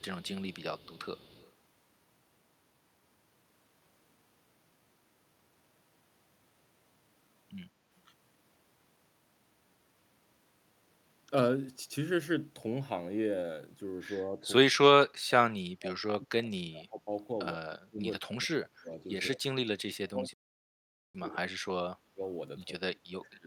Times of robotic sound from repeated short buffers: none

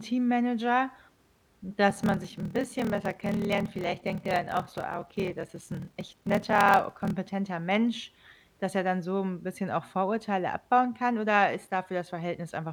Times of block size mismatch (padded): 1.88-7.15

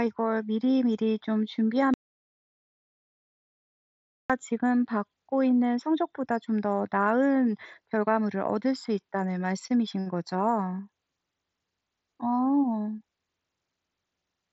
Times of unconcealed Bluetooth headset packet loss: 4.87

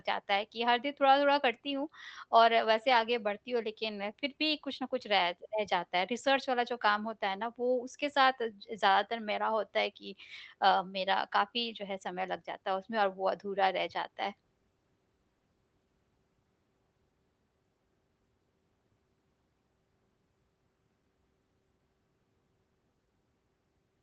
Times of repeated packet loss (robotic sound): none

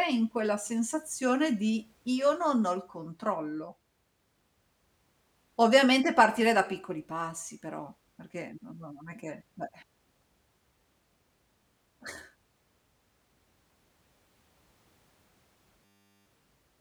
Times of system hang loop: 15.85-16.26

